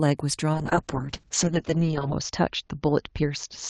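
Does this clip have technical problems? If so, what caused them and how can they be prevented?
Yes. A call bitrate drop begins at 0.54 s and lasts to the end. The speech turns coarse and watery, with the top band narrowing from 12 kHz to 8 kHz, which fits Opus falling from about 32 kbps to roughly 7 kbps after the bandwidth estimate fell, staying at its lowest for 1.6 s. Setting a higher minimum encoder bitrate and prioritising call traffic would prevent it.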